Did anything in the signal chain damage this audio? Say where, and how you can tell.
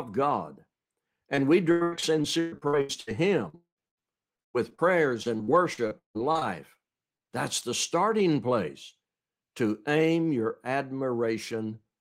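Yes. Repeated packet loss (robotic sound) appears at the network stage from 1.35 to 3.09 s, 3.49 to 4.83 s and 5.23 to 6.77 s, with 10, 9 and 11 gaps. Each hole, up to 159 ms long, is patched by extending the previous sound, so the speech turns choppy with pieces missing.

From 3.55 to 3.79 s, inside the second burst, about 220 ms of audio is absent. The last sound is stretched out and fades, then roughly 120 ms of silence follows before speech resumes. This is likely a long network dropout.

Short concealed packet loss follows at 7.17, 7.23 and 7.27 s. These are three back-to-back holes of 40, 20 and 20 ms. The decoder fills each by continuing the preceding sound and blending back, heard as a brief smear or wobble rather than a gap.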